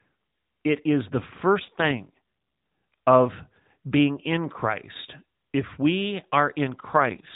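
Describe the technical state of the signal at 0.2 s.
At 0.2 s the audio is intact, with no fault present; the speech passes through the AMR narrowband mobile codec, which leaves it band-limited to below 4 kHz with only light coding colouration.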